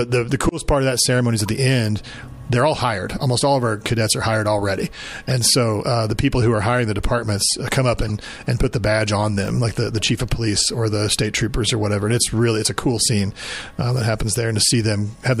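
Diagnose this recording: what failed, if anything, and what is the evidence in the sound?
Codec stage: corrupt frames decoded. Short chirps and noise bursts occur at 1.46 s, 3.14 s, 5.27–5.32 s and 7.99–8.10 s. The last two are louder. Flipped bits misplaced spectral energy.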